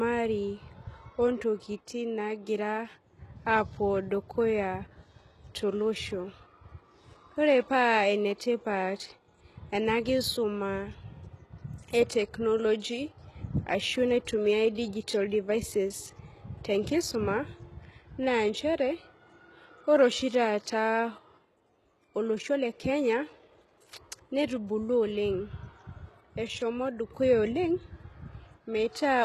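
Throughout the speech, the treble sounds synthetic, with s sounds gritty and metallic. This is most likely HE-AAC compression, with the codec damage plainly audible and pointing to a bitrate near 16 kbps. A spectrogram shows nothing above 12.3 kHz and repeated, blocky high bands copied up from below.

From 14.75 to 14.77 s, just before "devices tenkisuma", a short hiss of about 24 ms leads into the attack, which sounds softened. This pre-echo is quantisation noise smeared ahead of the onset within one transform block, and it appears as a low haze preceding the waveform's jump.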